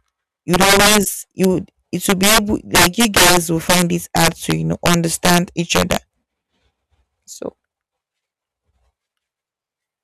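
Integer overflow cracks through this speech at 0.54 to 0.98 s, pushed about 11 dB past the limit, and at 1.44 s just before "would it", grazing the limit. They return just after "would it" at 2.10 to 2.38 s (about 9 dB over), 2.75 to 5.38 s (about 13 dB over) and 5.75 to 5.96 s (about 7 dB over). Loud peaks wrap to the opposite sign instead of being limited. The waveform shows large vertical jumps and the spectrogram shows broadband vertical streaks.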